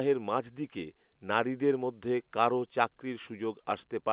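No faults are audible in the speech, which is carried over A-law G.711 telephone coding at 8,000 samples a second, so it is band-limited below 4 kHz as that path requires.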